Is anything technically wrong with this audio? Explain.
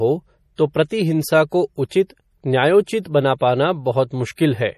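Yes, two faults. Throughout, the speech sounds watery and swirly, with nothing above 15.1 kHz. That is likely MP3 compression, starved of bits, which fits a low bitrate near 40 kbps. From 0.56 to 0.58 s there is pre-echo. A brief hiss runs about 27 ms ahead of a sharp attack, because block-spread quantisation noise fills the quiet moment before it, and the attack sounds softer.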